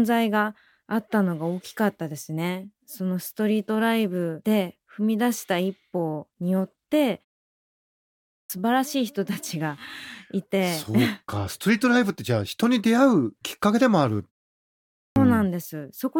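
Twice the speech comes back from a pause with its opening chopped off, a clipped start after a pause. At 7.88 s, after a 0.72 s gap, about 0.62 s is swallowed before sound returns at 8.50 s. At 14.53 s, after only 0.3 s of quiet, about 0.63 s goes missing up to 15.16 s. The output device dozes off in the silence and is still waking up when speech resumes, so the words jump in abruptly with their first sounds gone.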